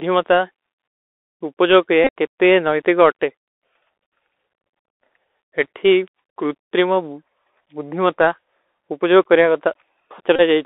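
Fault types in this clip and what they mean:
Bluetooth CVSD headset codec: Present throughout. The audio passes through the narrowband headset codec, which encodes each sample as a single up-or-down bit with an adapting step size. The sound fits a 64 kbps stream. The band is held to about 300 Hz to 3.6 kHz, so nothing bright survives. The coding damage is plainly audible. Loud high parts outrun the step and distort, sibilants turn scratchy, and a granular hiss sits under the speech.
Bluetooth headset packet repeated: From 2.04 to 2.10 s, just after "ଉପଜଵ କରିଯା", and from 10.36 to 10.41 s. When voice packets go missing, the chip decodes the previous packet's bits again. The first event loses about 41 ms scattered over 45 ms, which fits eleven 3.75 ms packets, and its longest run is roughly 20 ms. The second loses 30 ms, eight packets. During each run the repetition gives a brief buzz near 267 Hz.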